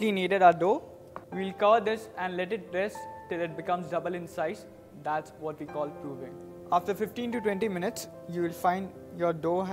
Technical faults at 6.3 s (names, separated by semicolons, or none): none